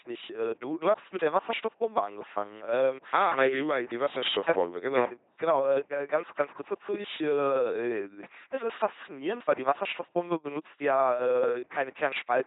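Throughout the clip, the LPC-10 vocoder rebuilds every instant as either a pulse-driven buzz or noise through a ten-pole filter. Speech becomes robotic and mechanical, with nothing above 3.9 kHz. The heavy damage fits a 2.4 kbit/s rate. Its hard all-voiced or all-unvoiced switching sets it apart from smoother low-bitrate codecs.

From 0.22 s to 12.33 s, clock slip clicks appear as faint ticks at a steady pace of roughly one every fifth of a second, around 70 in all. The likely cause is two unsynchronised clocks about 100 ppm apart, each slip dropping or repeating one sample. Their metronomic regularity distinguishes them from randomly timed dropout clicks.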